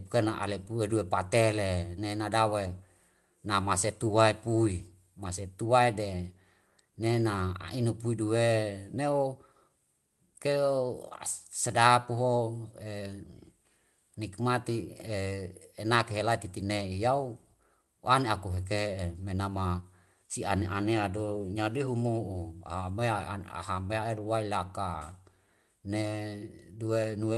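The clip is speech carried over a call link, with the top end cut at 12 kHz as Opus does. Clock drift between sender and receiver runs throughout. The sender's clock is slower than the receiver's, by roughly one and a half percent. The jitter buffer therefore keeps running short of audio. Repeated timing corrections follow from 0.17 s to 26.72 s. The receiver repeats small pieces to fill the gaps. The speech plays at 98% speed over that stretch. Around 400 ms is added in all. The corrections come at uneven intervals.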